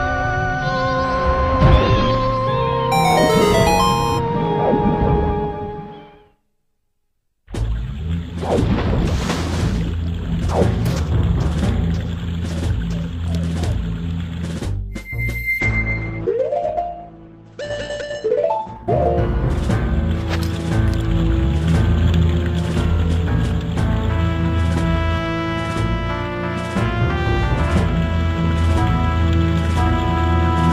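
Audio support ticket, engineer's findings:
Call bitrate drop, 15.62–20.41 s: bandwidth estimate fell, encoder starved, consistent with roughly 48 to 12 kbps. Highs cut off near 8 kHz; sound muffled, watery, coarse, worst for about 2.7 s.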